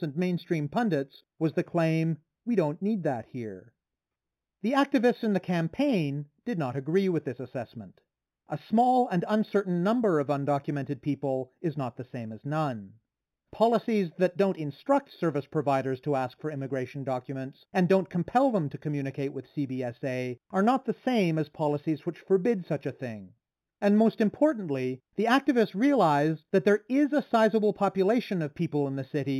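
Throughout the speech, imaging from linear upsampling: straight-line interpolation from 8 kHz to 44.1 kHz leaves a faint mirror image between 4 and 8 kHz, giving sibilants a metallic shimmer, not mere dullness.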